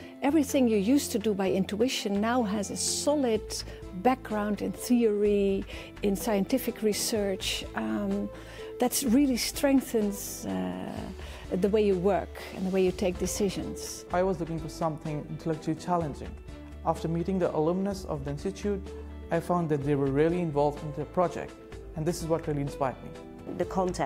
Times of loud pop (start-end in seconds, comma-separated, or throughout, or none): none